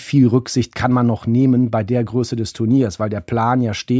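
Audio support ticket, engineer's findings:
Listened through the speech recording and nothing stood out as a fault worth flagging.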